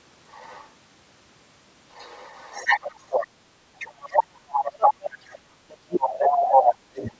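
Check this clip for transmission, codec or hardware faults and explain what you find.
Two echo-related faults are present, and the other side of the call is audible in the talker's line.

Other side's voice leaking through: 0.30–0.68 s, 1.93–3.27 s, 3.79–4.93 s, 5.31–5.36 s and 6.01–6.76 s. A second voice appears, faint at first and later nearly as loud as the talker. Loudspeaker echo was likely not fully cancelled.

Speech suppressed in double talk: from 3.74 s to the end. The talker's voice dips and breaks up, falling by roughly 35 dB at worst, while the other side talks. The canceller likely turned both voices down.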